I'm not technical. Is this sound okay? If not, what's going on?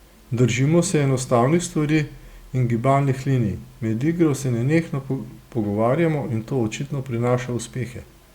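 Yes, this speech sounds fine, with nothing going wrong that you'd need to worry about.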